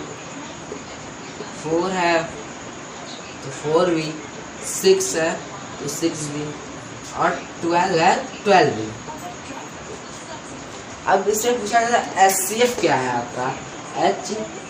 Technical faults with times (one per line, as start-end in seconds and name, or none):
none